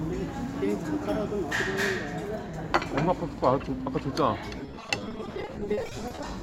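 From 4.56 s to 6.23 s, the audio breaks up with repeated packet loss, giving a robotic sound. Data went missing or arrived late again and again. Each hole was patched by stretching the last piece of sound. The holes are short, none longer than 30 ms, but they come in quick succession. About a third of this stretch is concealed fill. The result is choppy, with fragments dropping out.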